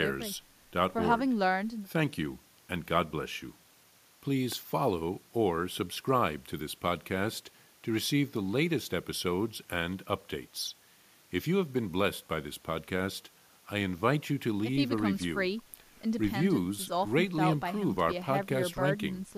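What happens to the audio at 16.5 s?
Nothing goes wrong at 16.5 s; the audio plays through that moment intact, with no dropout, click, distortion or other fault.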